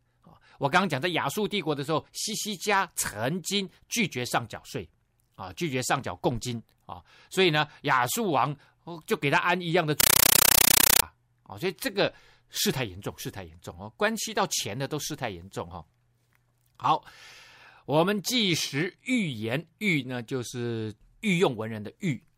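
A compressed stream played as audio: between 10.00 and 11.03 s in this speech recording, a Dolby Digital bitstream reaches the output as if it were ordinary samples instead of being decoded. Each coded frame is reproduced as a 9.33 ms burst of noise followed by silence, repeating 31.25 times a second, which fits a 448 kbps AC-3 stream. The speech is replaced by very loud, harsh, chattering static for that second.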